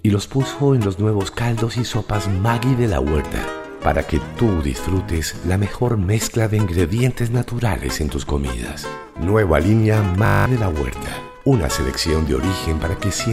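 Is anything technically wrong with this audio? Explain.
Yes. From 10.26 to 10.46 s the sound turns into a steady 50 Hz buzz, a system hang loop. The computer or driver froze while the hardware replayed the same 20 ms ring buffer ten times, so about a fifth of a second of real audio is lost.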